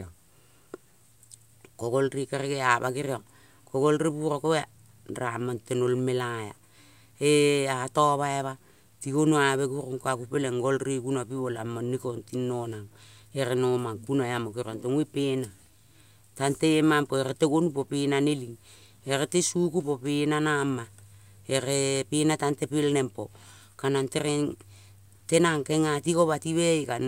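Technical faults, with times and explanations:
Throughout: low bit depth without dither. A grainy distortion rides on the speech and changes with it, worst on quiet syllables and decaying tails, roughly 40 dB below the signal. The likely cause is truncation to 10 bits without dither, leaving error correlated with the waveform.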